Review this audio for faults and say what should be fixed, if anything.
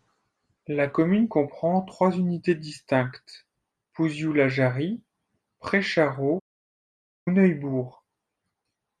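At 6.39 s the speech goes silent until 7.28 s, a playback stall, likely from the player running out of data or its thread blocking. A bit more buffering and keeping blocking work off the audio thread should stop it.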